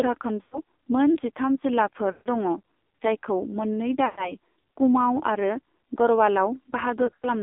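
Speech heard through an AMR narrowband mobile codec running at a very low rate, which fits about 5.9 kbps, confines the sound to 250 Hz to 3.7 kHz and makes it heavily buzzy and synthetic. Lost AMR speech frames, where the decoder repeats the last good settings with falling gain, cause short drawn-out fades at 0.42 to 0.6 s, 2.12 to 2.28 s, 4.06 to 4.35 s just after "जायखौ मोन्नै", and in scattered bursts between 7.06 and 7.26 s.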